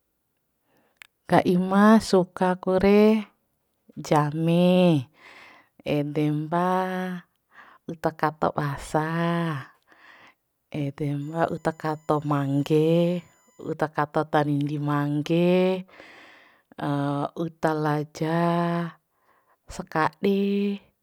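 Speech with USB whine from 11.2 to 13.7 s, ending just before "uta kato tanindi mangge". It is a faint, fixed-pitch tone built on 1 kHz and strongest at its 7 kHz harmonic, about 40 dB below the speech. That 1 kHz series, from the bus's 1 ms frames, sets it apart from 50 or 60 Hz mains hum.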